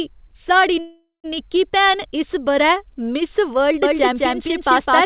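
At 0.8 s a call audio freeze begins. The last sound is drawn out into a fading buzz and then 160 ms of silence. Speech resumes at 1.26 s exactly where it stopped, now 0.44 s late, likely because delayed packets emptied the jitter buffer. A spectrogram shows smeared horizontal bands, then a blank gap.

From 3.83 s to the end, a doubled audio track appears. A second full-band copy at roughly the original level trails by about a fifth of a second, likely from a slower second capture path. It starts abruptly, with no decay or room colour. The waveform shows each burst repeated, and the spectrogram shows the same shapes shifted right.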